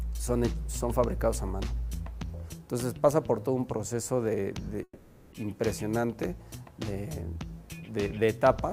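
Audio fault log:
4.83–5.34 s, call audio freeze: the last sound likely stretches into a fading buzz over about 490 ms. On a spectrogram it shows as smeared horizontal bands, then a 40 ms blank column, then the audio resumes late with nothing lost.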